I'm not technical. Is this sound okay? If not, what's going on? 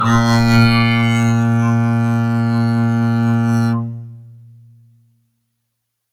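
Yes, this music sounds fine, with no problems to report.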